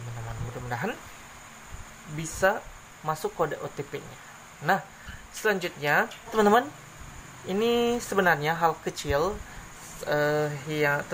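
Crude rate conversion runs throughout: samples were simply repeated, consistent with a 32 kHz to 48 kHz step, leaving gritty inharmonic fizz about 25 dB below the audio.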